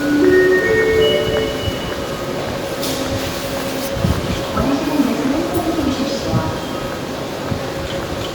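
No technical faults are audible.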